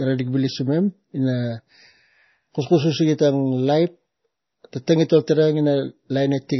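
Throughout, MP3 compression damage is heavy: nothing above 5.9 kHz, watery swirling where weak frequency lines flicker frame to frame, unlike plain low-pass dullness, which fits a likely very low bitrate.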